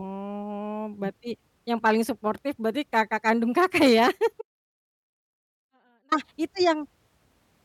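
At 4.42 s the speech drops out abruptly for 1.70 s, returning at 6.12 s. It is an audio dropout to a faint residue: a trace of sound lingers roughly 40 dB down, likely a signal loss with the path left live, unlike a pause or fade.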